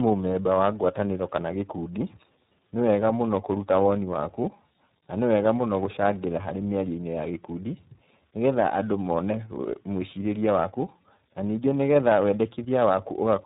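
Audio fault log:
Throughout: tandem speech coding. The speech has passed through two speech coders in a row. Its rough, smeared texture points to a low-rate ADPCM stage such as G.726 at 24 kbit/s, followed by a parametric frame-based coder consistent with iLBC at around 13.33 kbit/s, with A-law PCM between them. The second coder models the first one's quantisation noise as if it were speech, so errors compound into added roughness and a warbly instability. Nothing is present above 3.8 kHz, which gives the muffled, narrowband quality.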